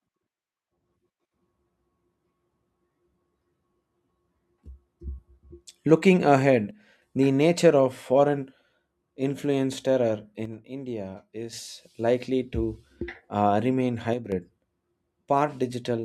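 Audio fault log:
6.71–7.02 s, 10.45–11.53 s and 14.13–14.32 s, one channel drops out: the speech abruptly sinks by about 6 dB and comes straight back, the gaps lasting roughly 0.3 s, 1.1 s and 0.2 s. Anything present in only one side would vanish outright. The likely cause is one stereo channel going silent, so the mono sum keeps only half of the content shared by both channels.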